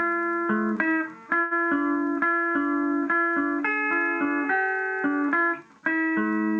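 At about 1.41 s the sound hangs for a moment, with the last instant held and stretched until about 1.53 s, carrying a faint buzz or dip before it picks up again from exactly where it left off. This is a short stall from a late packet: the jitter buffer ran dry, so the receiver filled roughly 97 ms by extending what it already had. Nothing was skipped, but playback now runs about 97 ms later than before.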